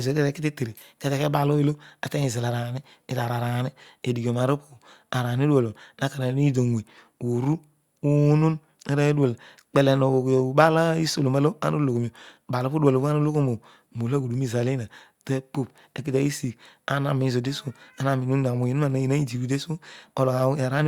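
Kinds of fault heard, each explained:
Nothing to flag here: the speech comes across without any of the technical faults this list covers.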